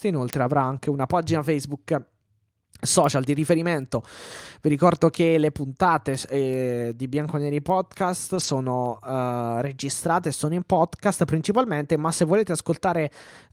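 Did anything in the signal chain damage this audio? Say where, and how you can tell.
Yes. Between 8.35 and 8.49 s the speech turns briefly rougher and noisier without any gap. That points to a lost packet rebuilt from error correction at the network stage: about 80 ms, which fits four lost packets, was played from low-bitrate copies carried in the following packets.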